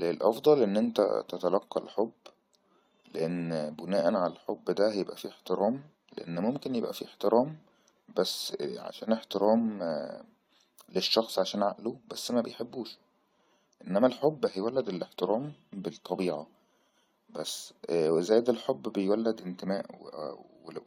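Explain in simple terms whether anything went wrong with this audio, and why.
Nothing went wrong here; it's a speech recording where you can just listen without anything breaking in or getting in the way.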